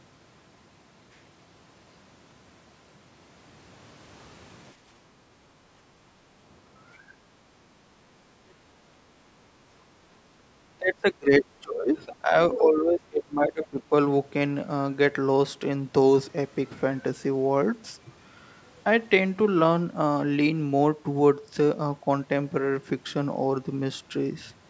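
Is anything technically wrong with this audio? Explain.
Yes, there are echo-canceller faults. Background gated by the echo canceller occurs at 4.76–5.3 s, 7.14–7.48 s and 7.78–9.33 s: the canceller clamped the microphone while far-end playback ran, so the room tone dips about 7–8 dB, then recovers.

Speech suppressed in double talk occurs at 10.53–12.34 s and 12.57–13.93 s. The speech drops by around 20 dB in patches, likely because the canceller could not separate the near talker from the loudspeaker echo and attenuated both.

The other side's voice leaking through occurs briefly at 12.52–12.58 s as a short scrap about 10 dB below the speech, likely residual loudspeaker echo the canceller failed to remove.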